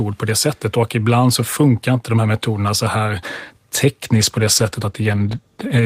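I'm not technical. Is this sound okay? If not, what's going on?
No. A call bitrate drop starts at 4.03 s and lasts to the end of the clip, so the speech sounds rougher and duller from there on. The call's connection appeared to have less room, so the software squeezing the audio was told to use far less data. With less to work with, it describes the sound more crudely and discards the crisp, high-pitched parts. The clip ends before the quality recovers.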